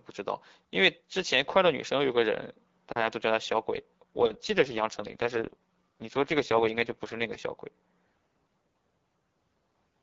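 A speech clip carried over AMR wideband (HD Voice). From 3.74 to 7.30 s there is an AMR rate drop: the link falls back to a lower codec mode, which fits a step from 12.65 to 6.6 kbit/s, trading speech detail for error protection. With no gap and no change in bandwidth, the voice turns rough, raspy and synthetic until the higher rate returns.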